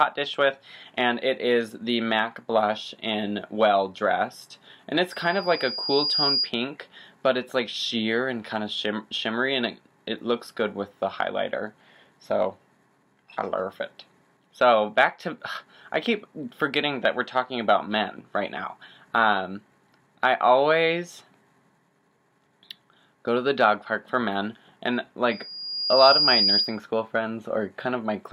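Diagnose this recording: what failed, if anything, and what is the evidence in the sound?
Loudspeaker feedback squeal occurs twice, from 5.10 to 6.51 s and from 25.31 to 26.80 s, so the failure sits in the analogue acoustic path between loudspeaker and microphone. Each time a single 4.9 kHz tone swells, over about a second the first time and somewhat faster the second, reaching roughly the level of the surrounding audio the first time and about 5 dB above it the second. At that frequency the microphone re-amplifies its own loudspeaker output with loop gain above one, so the tone feeds on itself until the loop is broken.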